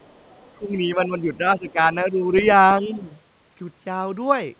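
Other side's voice leaking through from 0.0 to 0.55 s: a faint second voice, about 35 dB below the speech, sits under the start of the clip. The likely cause is a loudspeaker on the talker's device feeding the far end back into the microphone, with the echo canceller leaving a residue. It returns from 2.36 to 2.42 s as a brief scrap, much louder at about 15 dB below the speech, and it is cut off in the same narrow band as everything else, since nothing reaches above 4 kHz, which fits a narrowband telephone codec.

Speech suppressed in double talk from 0.59 to 1.78 s: the talker's level sinks by up to about 10 dB, for roughly 0.7 s in total, most likely because both sides spoke at once and the echo canceller turned down everything it could not separate from the echo. The same dip, again up to about 10 dB, returns from 2.1 to 2.33 s. A shallower drop of about 5 dB follows from 2.82 to 3.11 s. 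Each time the voice recedes for a moment.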